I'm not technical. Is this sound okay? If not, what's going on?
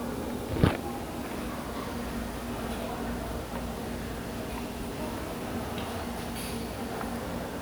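Yes, nothing wrong can be heard in this sound.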